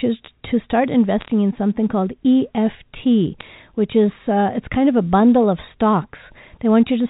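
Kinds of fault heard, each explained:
Bit errors on a digital phone line: Single bits in the 8-bit telephone samples were flipped, so individual samples jump to wrong values. A hit on the sign bit or a high-order bit throws the waveform sharply off and gives a hard tick. Two short bursts occur, from 1.20 to 1.28 s and from 3.40 to 3.48 s. Each sounds like a brief crackle of ticks laid over speech that stays intact. The error rate sounds low, a fraction of a percent.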